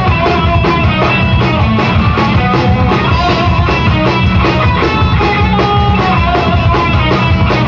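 No dropouts, clicks, distortion or other technical faults can be heard anywhere in the clip.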